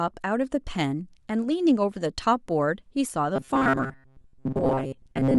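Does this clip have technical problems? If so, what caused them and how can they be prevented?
Yes. From 3.36 s to the end of the clip, the speech turns into a rigid, metallic buzz fixed at 134 Hz that still loosely tracks the words: robotic sound from repeated short buffers. The likely cause is audio arriving too seldom, so the software loops the last fragment, about 7.5 ms long, in place of most of the real signal. Unlike codec warble, the buzz stays at a fixed rate rather than smearing or bubbling. Giving the audio path a larger buffer or a more reliable delivery rate prevents it.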